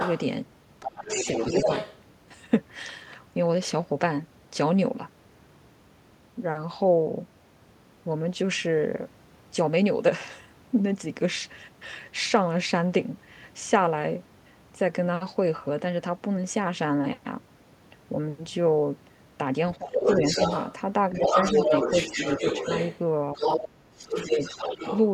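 A second voice is audible from 0.00 to 0.24 s and again from 0.8 to 1.98 s, a few decibels below the main speech. This is other-side voice leaking through, most likely loudspeaker playback that the echo canceller failed to remove from the microphone signal. Within the second stretch, from 1.65 to 1.69 s, the main talker dips slightly for a few tens of milliseconds. That dip is likely speech suppressed in double talk: with both voices present, the canceller turned down its own talker along with the echo.

At 19.78 to 20.08 s the talker's level falls sharply, by roughly 15 dB, for about a third of a second. From 19.95 to 24.99 s the leaked voice returns at roughly the same loudness as the speech, and the main voice is pulled down again during the overlap. The drops are slight from 21.11 to 22.44 s, and deeper, around 10 dB, at 23.34 to 23.40 s and 24.06 to 24.39 s. Each time the talker sounds ducked while the other side speaks.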